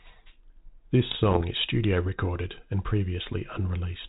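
From 1.11 to 1.42 s, bit errors on the ADPCM link derail the decoder's step size and predictor, giving pops, rough bursts and brief level jumps.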